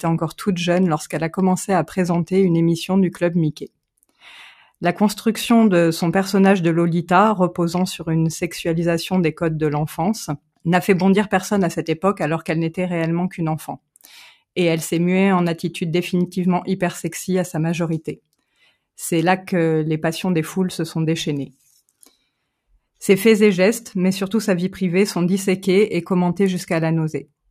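At 3.53 to 3.78 s, 10.37 to 10.66 s and 18.16 to 18.75 s, sound is cut by the noise suppressor: it misreads the sound as noise and pulls it down by about 21 to 22 dB, leaving brief sunken gaps of a few hundred milliseconds.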